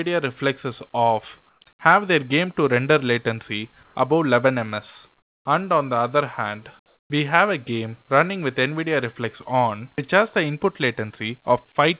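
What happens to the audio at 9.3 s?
Nothing goes wrong at 9.3 s; the audio stays intact there, with only the narrowband character of the call codec, which leaves nothing above 4 kHz.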